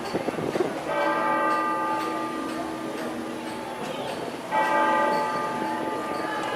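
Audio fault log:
No faults detected in the audio; nothing to log.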